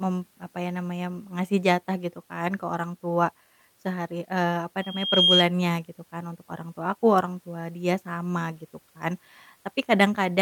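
A piercing 3.2 kHz tone swells over under half a second after "eee apa", from 4.80 to 5.47 s, peaking about 10 dB above the speech before "gitu kan untuk orang". This loudspeaker feedback squeal arises when the microphone recaptures its own loudspeaker and loop gain exceeds one at that frequency.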